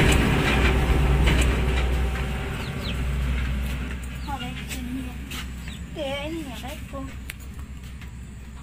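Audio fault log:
0.00–3.88 s, doubled audio track. A second copy of the sound runs under the original, already playing when the clip opens. It trails by about one and a half seconds and sits roughly 5 dB lower. The copy is full-band and dry, with no decay or room colour, so it reads as a plain repeat rather than an echo. It cuts off abruptly at 3.88 s. The likely cause is a second capture through a slower path.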